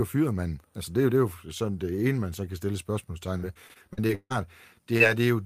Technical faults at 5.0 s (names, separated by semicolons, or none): short concealed packet loss